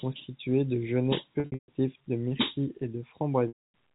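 From 1.40 to 1.68 s, between "de genêts" and "de myrtilles et", and from 3.48 to 3.71 s, a buzzy held tone fades away. This is packet loss with pitch repetition, where the last pitch period is looped to cover missing packets.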